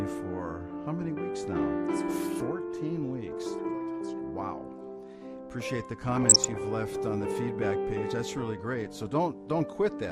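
Throughout, the sound is dull and granular, with a gurgling edge. This is likely MP2 compression, which fits a rate around 80 kbps. Too few bits reach the 32 sub-bands. Upper bands switch off and flicker, and the rest are coarsely quantised.

From 6.17 to 6.56 s, DAB burbling appears. Bit errors, at a fraction of a percent, slipped past error correction. Corrupted samples put short blips of noise in single sub-bands, and corrupted scale factors, where they got through, made sub-bands jump in level for up to a frame.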